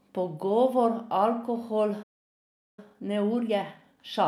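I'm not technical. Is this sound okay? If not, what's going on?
No. At 2.02 s the speech stops dead for about three quarters of a second, until 2.79 s. This is a playback stall, likely the player running short of data or being held up. From 2.79 s to the end there is time-compressed catch-up: the player trims tiny slices to clear its backlog, so the speech runs about 1.15 times faster at normal pitch.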